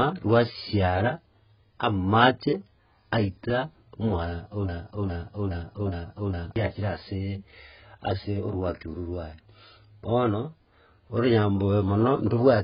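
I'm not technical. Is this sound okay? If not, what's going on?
No. Broken-record loop, 4.69 to 6.56 s: a 0.41-second scrap of speech repeats five times in a row, likely from playback stalling. The speech meant for that stretch is missing.

Low-bitrate audio saved at a high bitrate, throughout: the speech sounds thin and smeared, likely because it was squeezed hard once, then resaved larger, which couldn't restore lost detail.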